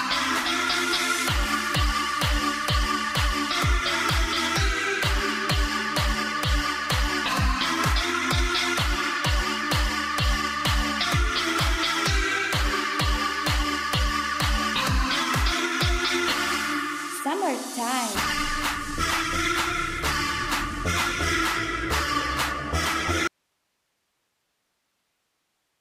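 The audio drops out abruptly at 23.27 s and stays out until the end of the clip. This is an audio dropout to a faint residue. The wanted signal vanishes mid-flow, with no fade. In its place is only hiss, sitting roughly 50 dB below the normal signal level. The break is too sudden to be a pause. The likely cause is a lost feed upstream while the path after the break stayed live, passing its own noise floor.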